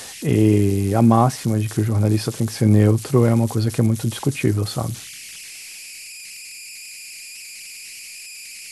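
An undithered delta-sigma converter falls into repeating bit patterns, causing converter idle tones throughout this speech: a tone around 2 kHz, about 18 dB below the signal.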